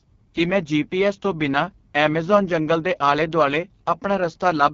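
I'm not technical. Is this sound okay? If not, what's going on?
No. AMR wideband (HD Voice) codec damage runs through the whole clip. This phone-call compression rebuilds the voice from a simplified model of the mouth and throat, and here it's set very low, so speech sounds rough and raspy, with nothing above about 7 kHz.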